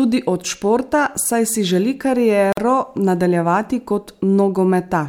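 Two separately encoded pieces of the speech were joined without trimming the encoder's start-up delay and final-frame padding, producing a gap at a join of encoded pieces at 2.53 to 2.57 s. The leftover silence, about 48 ms long, drops into the middle of continuous speech, with its edges smeared by the codec. The talker then resumes exactly where the sound broke off, so it comes across as a brief hiccup rather than a natural pause.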